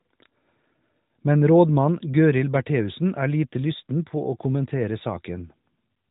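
No technical faults are audible.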